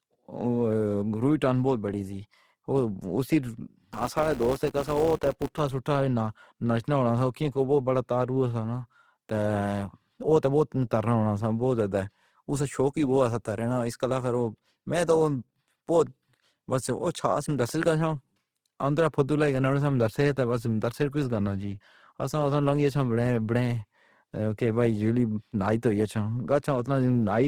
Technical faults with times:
0.00-27.47 Opus compression
3.94-5.60 filter restarted on every block

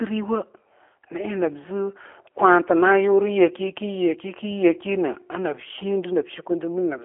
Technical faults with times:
0.00-7.04 G.729 codec

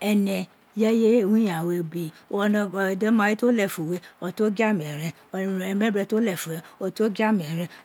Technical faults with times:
none

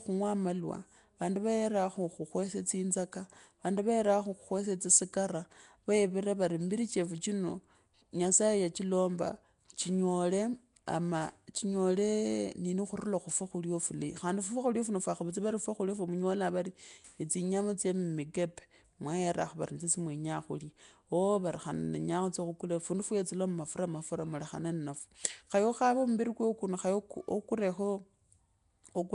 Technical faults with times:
0.00-29.15 Nellymoser compression

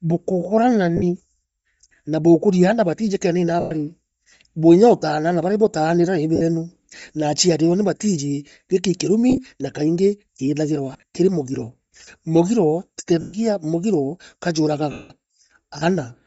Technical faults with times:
0.00-16.26 Bluetooth LC3 compression
0.97-1.03 lost LE Audio frames
3.60-3.72 lost LE Audio frames
6.36-6.42 lost LE Audio frames
9.30-9.39 lost LE Audio frames
10.93-11.03 lost LE Audio frames
13.21-13.34 lost LE Audio frames
14.92-15.10 lost LE Audio frames

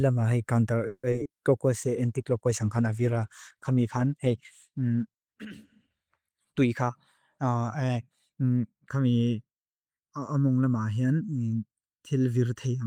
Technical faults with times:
0.87-1.29 repeated packet loss (robotic sound)
1.71-7.71 call bitrate drop
6.44-6.90 jitter buffer speed-up
7.37-8.44 jitter buffer speed-up
8.89-12.87 channel delay (comb filtering)

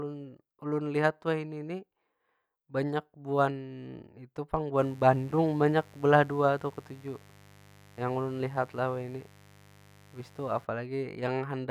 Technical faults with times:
4.80-10.65 mains buzz

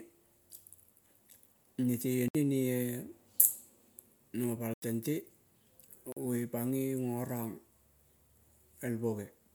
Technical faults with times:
2.28-2.35 block of digital silence
4.74-4.82 block of digital silence
6.12-6.17 block of digital silence

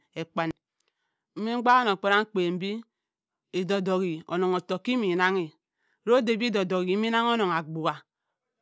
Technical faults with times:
none

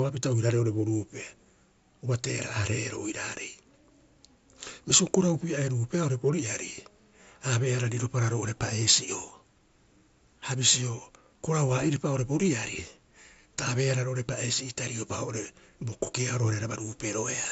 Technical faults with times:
none

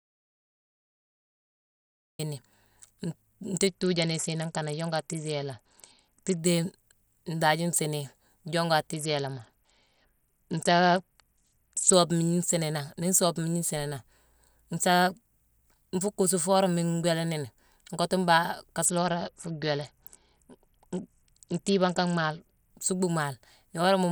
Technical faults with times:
0.00-2.19 audio dropout to silence
3.67-6.39 Bluetooth SBC bit pool drop
8.93-11.93 Bluetooth SBC bit pool drop
18.85-22.71 Bluetooth SBC bit pool drop

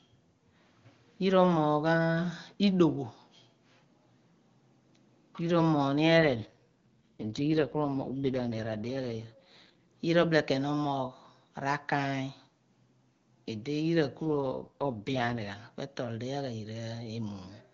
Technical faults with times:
6.18-9.83 AMR rate drop
14.26-15.56 AMR rate drop

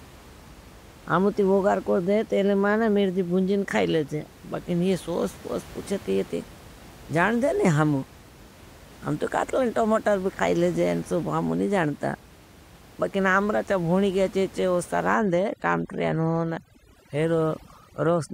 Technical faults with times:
15.14-18.33 overdone noise removal

